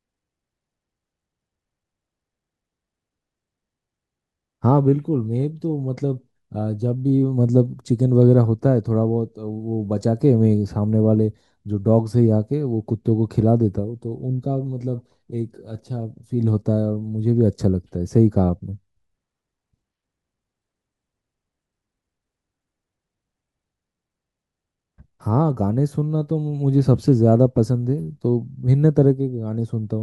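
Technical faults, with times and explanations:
No technical faults, so there are no times or explanations to give.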